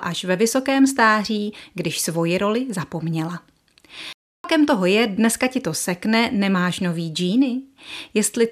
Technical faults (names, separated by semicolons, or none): playback stall